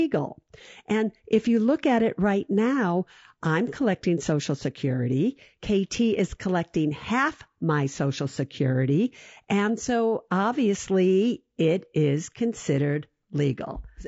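Speech running the full clip with plainly audible coding damage throughout: the voice sounds rough and grainy, with noise filling the gaps between harmonics and a thin, synthetic top band. This is likely low-delay AAC compression (AAC-ELD), whose short frames resolve pitch poorly at a low bitrate around 32 kbps.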